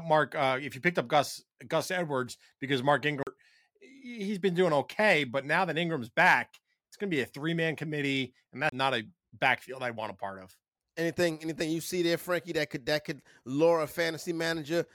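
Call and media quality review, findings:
CD skip, 3.23 to 3.27 s. Tick, brief mute of roughly 40 ms, then speech resumes mid-stream just before "he's been doing okay". Source: disc playback. Laser jumped to another spiral turn after a knock or surface flaw.

CD skip, 8.69 to 8.72 s. Same pattern, mute of roughly 30 ms, right after "three man committee and". Tracking jump of one or more disc revolutions. Playback continues from a displaced position.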